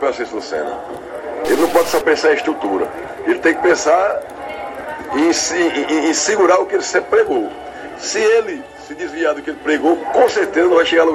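From 1.45 to 2.01 s a stuck bit, likely a data line held fixed, shifts samples by a step near -25 dBFS, causing harsh, buzzy distortion.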